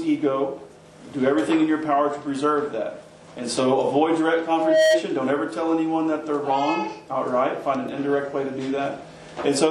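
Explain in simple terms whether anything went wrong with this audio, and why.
A single steady whistling tone at 633 Hz appears at 4.48 s, swells up over roughly a third of a second, and ends up a little louder than the rest of the sound before stopping at 5.04 s. This is loudspeaker feedback squeal. A microphone picked up its own loudspeaker, and at that one pitch each trip around the loop came back stronger than before, so the tone kept growing on its own until it stopped.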